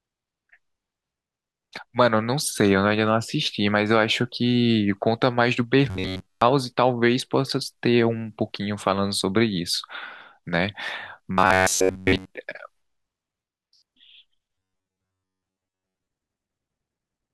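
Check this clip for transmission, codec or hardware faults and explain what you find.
Robotic sound from repeated short buffers occurs at 5.90–6.47 s, 11.31–12.31 s and 14.55–16.07 s. It is likely caused by late audio being padded with repeats of a roughly 11 ms fragment, giving a metallic 93.8 Hz buzz through most of each stretch.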